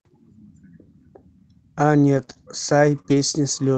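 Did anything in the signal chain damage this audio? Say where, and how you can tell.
Yes. Scattered short gaps appear in the speech between 2.17 and 3.20 s, caused by network packet loss on the call's receive side. Around four brief dropouts, none longer than about 20 ms, show up as small ticks and smeared hiccups. About 80 ms of audio never arrived, and the jitter buffer filled each hole by extending the preceding sound, rebuilding about 140 ms and adding 7 ms to the timeline. The Opus call path's 8 kHz band limit applies throughout.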